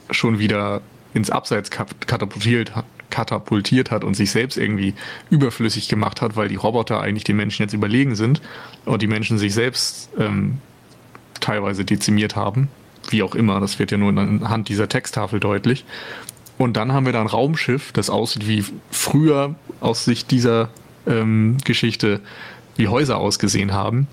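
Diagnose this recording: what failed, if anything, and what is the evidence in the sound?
Gain pumping runs through the whole speech recording, in the call-processing stage. The room noise, about 39 dB below the speech, swells in every pause and ducks under each loud syllable, a swing of around 15 dB. The likely cause is excessive input gain hitting a fast limiter.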